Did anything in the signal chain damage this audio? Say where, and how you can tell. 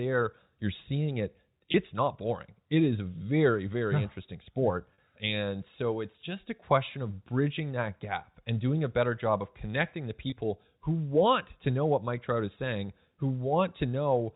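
Yes, at the network stage: packet loss with pitch repetition at 1.72–1.74, 4.94–4.98, 7.98–8.00 and 10.30–10.32 s. The receiver fills each gap by repeating the last pitch period, heard as a brief held buzz. The 20 ms gaps, 40 ms at 4.94 s, fit one or two lost packets.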